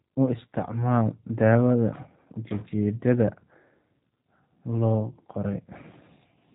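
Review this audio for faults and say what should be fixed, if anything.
Throughout the recording the speech carries G.729 codec damage, plainly audible: nothing survives above 3.8 kHz, and the voice sounds rough and slightly synthetic, which fits G.729A at 8 kbit/s. The codec rebuilds each short frame from a vocal tract filter, a pitch estimate and a few pulses. Plain band-limiting would only sound dull, but here the roughness shows the waveform itself was resynthesised. To prevent it, capture and transmit through a wideband codec such as Opus or G.722.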